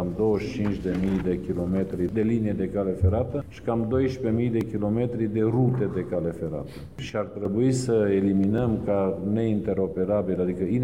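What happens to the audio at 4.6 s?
A block of digital silence lasting 1.45 ms occurs at 4.61 s. The output is briefly replaced by zeros, consistent with a 64-sample buffer not being filled in time. The abrupt cut to zero and back produces a single sharp tick.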